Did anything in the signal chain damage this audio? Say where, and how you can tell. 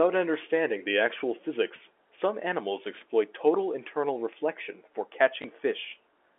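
Yes. The damage is in the network stage: at 5.42 to 5.44 s, near the end of this speech clip, a 20 ms stretch of audio went missing, which fits a single lost packet. The receiver covered the gap by replaying the previous packet, so this is packet loss with the last packet repeated. Only one packet was repeated, so it sounds like a small blip. The telephone band (300 Hz to 3.5 kHz) of the G.711 line can be heard throughout.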